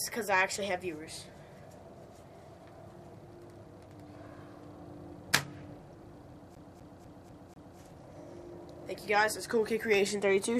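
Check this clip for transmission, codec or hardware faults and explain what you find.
One hardware fault is present: from 6.55 to 7.78 s the CD is stuck on one turn. A scratch keeps throwing the laser back a track, so the same 0.25 s of sound repeats five times with brief mutes. The waveform shows identical blocks separated by near-silent gaps, and the spectrogram shows matching stripes at a steady, rapid stutter.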